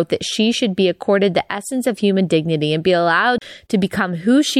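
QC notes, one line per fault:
3.38–3.42 s, CD skip: the speech drops out for about 30 ms with a tick, then resumes from a different point on the disc as the laser jumps tracks. The waveform shows a near-flat gap with a click at its edge, and the spectrogram a thin vertical line and broken speech.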